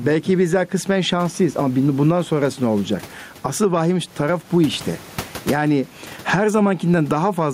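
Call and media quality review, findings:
Gain pumping throughout the speech. Room noise, about 31 dB below speech; gain swinging around 10 dB. Likely cause: mic input gain far too high, with a fast limiter clamping every peak. Dynamics squashed.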